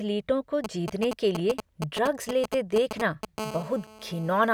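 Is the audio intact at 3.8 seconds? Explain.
No, at 3.8 seconds you're right in the middle of a GSM phone buzz running from 3.39 to 4.49 s. A nearby 2G phone on a call pulses about 217 times a second, and the audio circuitry rectifies those bursts into a steady, raspy, harmonic-rich buzz sitting about 14 dB under the speech.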